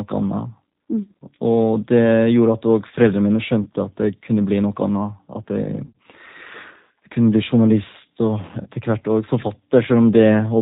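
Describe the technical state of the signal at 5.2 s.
At 5.2 s you're hearing G.729 codec damage, and it runs through the whole clip. The speech is rebuilt from a vocal tract filter plus sparse pulses, with nothing above 4 kHz, so it sounds rough, thin and a bit synthetic, which fits an 8 kbit/s stream.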